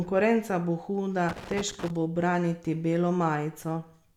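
Right after "bo huda", from about 1.29 to 1.90 s, there's loose connector crackle: a worn or dirty contact keeps making and breaking, chopping the signal into an irregular, scratchy burst, and it clears up just before "bo braniti".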